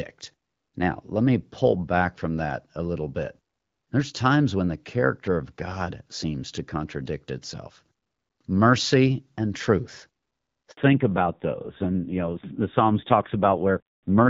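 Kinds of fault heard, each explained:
Handover gap: At 10.71 s the speech cuts out for about 60 ms and resumes at 10.77 s. The sound dies away quickly rather than fading, and stays silent until the new link starts. That points to the call being transferred between networks, with no speech frames delivered while the new link was set up, so whatever was said in that interval is simply missing.
Fallback to narrowband: From 10.77 s to the end, nothing is present above 4 kHz, and the speech turns duller and rougher than in the first part of the clip. Before the switch, the fuller bandwidth and light coding damage fit HD Voice at around 12.65 kbit/s. Afterwards, the codec appears to have stepped down to a legacy narrowband mode. The added roughness suggests a low rate, around 5.9 kbit/s.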